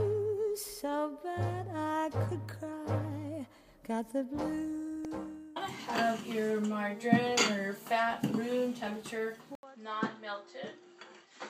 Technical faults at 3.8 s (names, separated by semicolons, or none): none